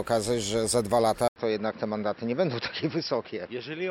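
At 1.28 s the sound cuts out for about 80 ms, then returns duller and boxier for the rest of the clip: nothing remains above 5.6 kHz, the level sits roughly 5 dB lower, and a new faint background noise appears well beneath the signal. The abrupt change in bandwidth, tone, level and noise floor, with a gap at the join, points to an input switched to a poorer device, most likely a narrower-band microphone or headset taking over mid-recording.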